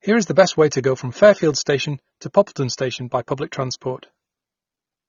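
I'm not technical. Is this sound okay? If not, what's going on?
No. The speech carries AAC compression damage from start to finish, plainly audible. Nothing above roughly 6.9 kHz survives, so the voice sounds dull and muffled, as if heard through a closed door. The crisp edges of consonants like s and t are softened, and a watery, fizzy smearing clings to the sound. The likely cause is saving or streaming it at too low a quality setting, which strips out detail the encoder judged least noticeable.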